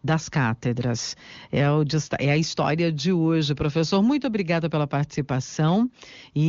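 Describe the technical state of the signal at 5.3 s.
At 5.3 s the speech is intact, with no audible fault at that moment.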